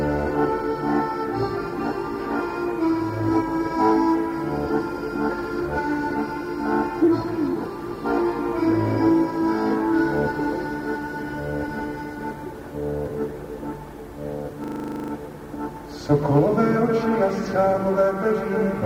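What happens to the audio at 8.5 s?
Nothing goes wrong at 8.5 s: the audio plays through that moment intact, with no dropout, click or other fault.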